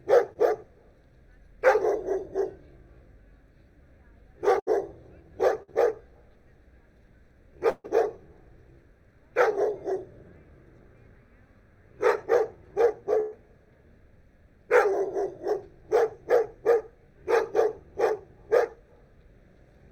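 Right at the start, from 0.33 to 0.37 s, there's a short concealed packet loss: about 20 ms of audio never arrived in time, so the receiver extrapolated the previous sound to cover the hole and cross-faded back, leaving a quick smear.

After that come four bursts of packet loss, where longer runs of packets went missing. At 4.59 to 4.69 s, about 71 ms was filled in and 80 ms of real audio is gone. At 5.63 to 5.70 s, 51 ms was filled and 60 ms is lost. At 7.70 to 7.86 s, 144 ms was filled, including 10 ms of silence, and 140 ms is lost. At 13.20 to 13.34 s, 117 ms was filled and 120 ms is lost. Each time the receiver held the last sound going and faded it down, which comes across as a buzz or a hiss depending on what was playing, and then the audio picks up a bit further along with the missing stretch skipped.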